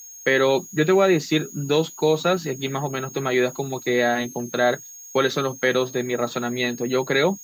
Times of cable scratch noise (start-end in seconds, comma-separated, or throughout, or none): none